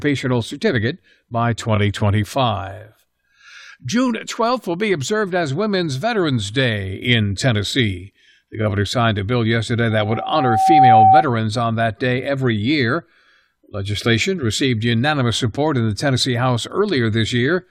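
From 9.90 to 11.25 s, after "signed a bill yesterday", loudspeaker feedback squeal appears. The microphone re-amplifies its own speaker. A 764 Hz tone swells over about a second.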